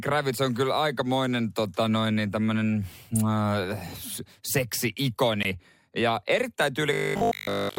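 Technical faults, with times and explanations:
5.43 s, gap at a join of encoded pieces: A silence of about 17 ms opens in the speech, with edges smeared by the codec. The sound then resumes exactly where it stopped. This points to two separately encoded pieces joined without trimming, so one encoder's start-up delay and the other's padded final frame both remain. Nothing is lost, which distinguishes it from a dropout, and there is no click as with a bare splice.
6.93 to 7.77 s, robotic sound from repeated short buffers: Through to nearly the end, the speech becomes a rigid, metallic buzz fixed at 50 Hz. It still roughly follows the shape of the words. The likely cause is audio arriving too seldom, with playback filling the time by looping the last piece of about 20 ms, one over 50 Hz, for virtually the whole stretch. The steady pitch set by the loop length distinguishes this from a vocoder or pitch-shift effect.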